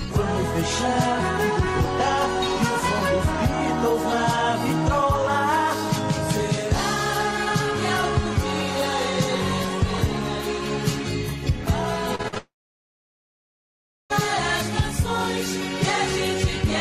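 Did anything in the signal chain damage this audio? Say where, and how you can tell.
Yes, the damage is at the network stage. From 12.15 to 12.38 s there is repeated packet loss, heard as robotic sound: four short holes, the longest 45 ms, with nearly half of that quarter-second patched by repeating the last sound. On a spectrogram this shows as smeared, flat-topped harmonic blocks alternating with brief gaps. The waveform has short, oddly uniform segments where the receiver looped stale audio instead of real signal.

Straight after, from 12.38 to 14.12 s, comes a long network dropout, the likely cause of a 1.7 s loss. The concealment first extends the last sound as a fading buzz. Then about 1.6 s of silence follows before the audio resumes with that section simply missing. The waveform shows a decaying tail collapsing to a flat line. The spectrogram shows a brief streak of frozen energy and then a blank band until 14.12 s.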